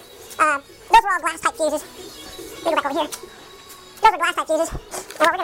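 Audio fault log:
Throughout: audio read two samples at a time (double speed). Each pair of samples was taken as one frame, as if the data held two channels or twice-wide samples, so playback runs at 2x speed and a full 12 semitones higher.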